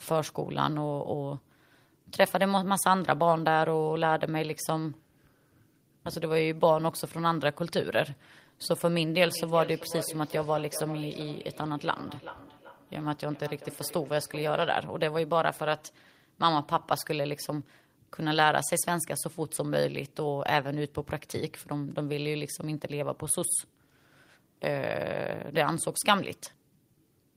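Feedback echo between two devices runs through this speech recording from 9.24 to 14.94 s. A second device in the room replays the call, the first device's microphone recaptures it unnoticed by the local echo canceller, and the sound returns roughly every 0.4 s, peaking about 13 dB below the speech.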